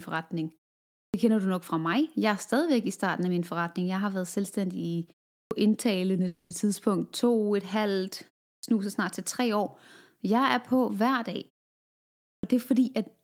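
Speech with three kinds of fault. Clipped start after a pause occurs at 1.08 s, 5.46 s (after "har været selvstændig i", before "indtalende tidspunkt"), 8.58 s (after "et halvt", before "snart til tre år") and 12.38 s. Each onset loses 49 to 58 ms because the output device sleeps during the preceding 0.36 to 0.96 s pause and wakes late. A call audio freeze from 6.27 to 6.52 s fills 230 ms with a fading continuation of the last sound, with nothing missing afterwards. It was likely caused by held-up packets draining the jitter buffer. A jitter buffer speed-up runs from 11.51 to 13.17 s after "er på hver". The receiver trims pitch-period slices to play at 114% speed with unchanged pitch, shedding around a third of a second of backlog.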